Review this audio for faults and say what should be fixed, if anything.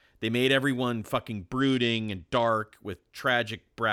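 A Bluetooth SBC bit pool drop runs from 1.60 to 2.49 s. The congested link forced a lower bit budget, which fits a fall from bit pool 31 to 13 (about 94 kbps). The top sub-bands starve and the rest quantise coarsely, so the speech dulls and turns gritty. Clearing radio congestion or holding a higher minimum bit pool would prevent it.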